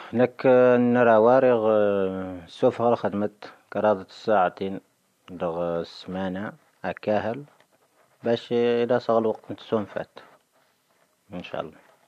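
No technical fault can be heard anywhere in this speech recording.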